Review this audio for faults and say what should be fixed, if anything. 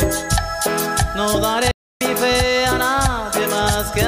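A stream reconnect breaks the audio from 1.71 to 2.01 s: the connection dropped, the player fell silent for about 286 ms, then reopened the stream and started a new decoder partway through. What sets it apart from an ordinary dropout is that playback doesn't pick up where it stopped. It comes back roughly a fifth of a second further on, skipping material, and its first moments are muted or fade in as the fresh decoder settles. To prevent it, keep the connection alive with retries and buffer enough ahead to ride out brief network interruptions without reconnecting.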